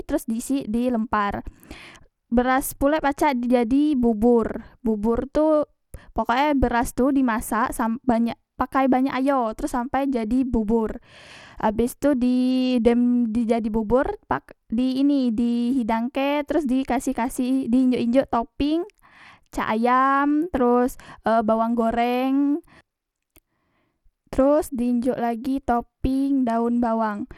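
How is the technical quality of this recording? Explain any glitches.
The technical quality is poor throughout. Likely Bluetooth SBC compression at a starved bit allocation coarsely quantises the sub-bands, leaving gritty, plainly audible codec damage on the speech and nothing above 17.6 kHz.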